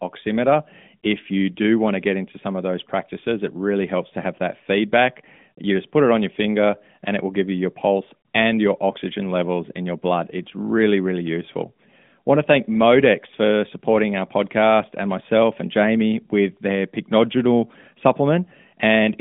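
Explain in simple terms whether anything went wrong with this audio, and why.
Nothing went wrong; this audio has no faults.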